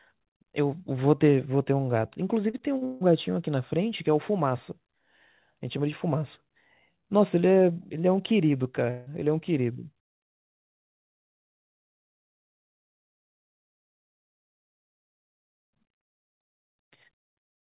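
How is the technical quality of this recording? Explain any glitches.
The recording has two audible glitches, both from the network. The audio is band-limited, with nothing above 4 kHz. That fits a narrowband call codec such as G.711 mu-law.

From 2.5 to 3.03 s there is repeated packet loss, giving a robotic sound. Audio drops out several times in quick succession, with the longest hole about 154 ms. The receiver patches each hole by extending the last sound. Nearly half the stretch is patched, so it sounds choppy.

From 8.91 to 9.08 s, about 160 ms of audio is missing. The gap is filled with a smeared continuation of the preceding sound rather than silence, and then the audio resumes. The cause is likely a long network dropout that the receiver covered over.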